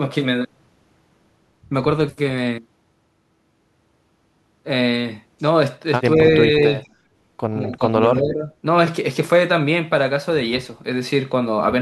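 Speech dips at 6.16 to 6.2 s, 7.61 to 7.94 s and 8.14 to 8.51 s, by up to about 15 dB. Likely speech suppressed in double talk: the echo canceller ducked overlapping talk.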